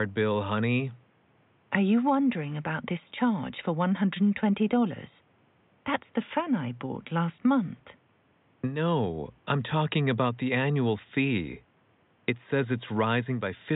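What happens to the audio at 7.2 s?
Nothing goes wrong at 7.2 s: the speech carries on intact through that moment, with only the room noise sitting about 38 dB below it as part of the recording.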